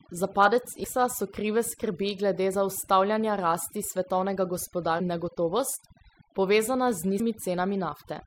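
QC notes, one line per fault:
Throughout: overdone noise removal. The background drops and breaks up into twinkling specks where stray bands flicker on and off. A noise reducer set too strong cuts each frequency band hard whenever it falls near its noise estimate. The quieter parts of the speech sit near that level, so they are cut too. Band-by-band gating like this leaves isolated tonal fragments rather than a smooth floor.
0.83 s, 4.99 s and 7.19 s: damaged data in a compressed stream. Each is a brief chirp or blip. The first falls just before "so krive skrbi glede". The second falls between "glede zaustavljanja rasti svetovnega" and "in negotovost". The third comes near the end. Corrupted bytes make the decoder misread those frames and lose sync. It skips forward to the next valid frame header, which causes the glitch.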